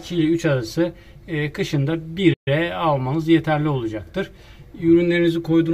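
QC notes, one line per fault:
2.33–2.48 s, playback stall: sound stops abruptly mid-flow for roughly 130 ms, then resumes; likely the player ran short of data or its output thread was briefly blocked.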